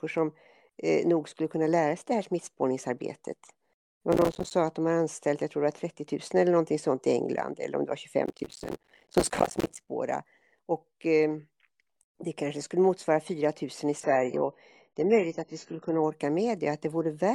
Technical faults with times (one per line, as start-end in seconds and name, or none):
4.12-4.51 processor overload crackle
8.26-9.89 processor overload crackle
14.04-16.04 adaptive stream at a lower bitrate